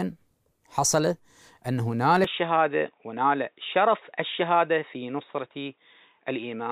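At 2.24 s the audio abruptly loses its top end and stays that way to the end. Nothing above 3.8 kHz survives, so the sound turns dull and boxy. The switch is seamless, with no gap, and the level barely changes. A faint new background noise appears, far below the signal. This points to an input switched to a poorer device, likely a change to another microphone or a headset call profile with a narrower band.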